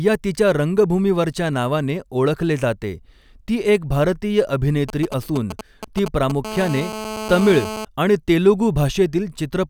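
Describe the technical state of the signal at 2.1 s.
At 2.1 s the speech signal is intact, with no audible fault at that moment.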